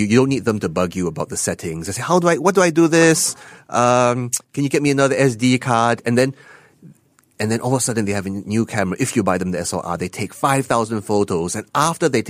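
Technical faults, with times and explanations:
No technical faults are audible anywhere in this speech recording.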